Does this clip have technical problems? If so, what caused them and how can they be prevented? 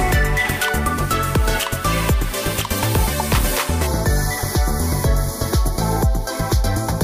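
Yes. From 3.87 s to the end, one channel lags by about a fifth of a millisecond before mono summing, cancelling near 3 kHz and leaving a hollow, phasey channel delay (comb filtering). Prevention: align channel timing before summing to mono.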